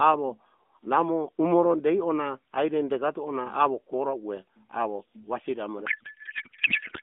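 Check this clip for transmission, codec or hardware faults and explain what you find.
One fault is present: a codec payload misread from 5.86 s, just after "wasiri amore", to the end of the clip. The AMR stream is packed in octet-aligned form but decoded as bandwidth-efficient, so every field lands in the wrong place and the speech turns into garbled noise and warble that barely tracks it. Before that point, the narrowband AMR path passes roughly 200 Hz to 3.5 kHz with light coding damage, which fits the 12.2 kbps mode.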